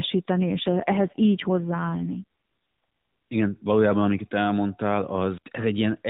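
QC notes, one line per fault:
0.41–2.24 s, AMR rate drop: the speech turns rougher and more buzzy and synthetic, with the band unchanged and no gap. The mobile codec's mode stepped down, consistent with a switch from 12.2 to 5.9 kbps, leaving fewer bits for each frame before recovering.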